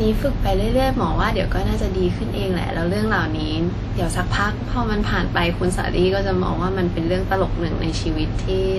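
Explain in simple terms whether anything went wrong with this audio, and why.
The speech sounds washy and ringing throughout, with hiss that swells along with it, and nothing above about 14.7 kHz. That's likely WMA compression squeezing it hard.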